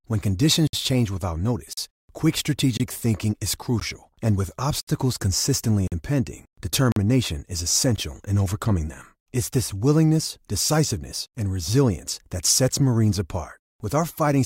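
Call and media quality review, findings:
Hard-edged dropouts to silence, 16 to 61 ms long, about once a second at 0.67, 1.73, 2.77, 3.80, 4.81, 5.88, 6.92 and 7.96 s. Gap between stream segments: 1 s segment timestamps leave holes the player pads with silence. No audio lost.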